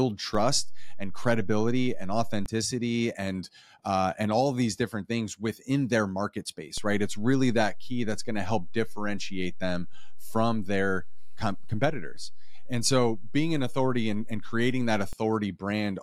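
At 0.35 s the zero line of the waveform jumps. This is a DC step, about -26 dBFS. The offset lasts until 2.46 s. A second DC step comes at 6.78 s, right after "things within their market", at about -28 dBFS. It lasts until 15.13 s. Each jump sounds as a low thump or click. The speech carries on unchanged through both.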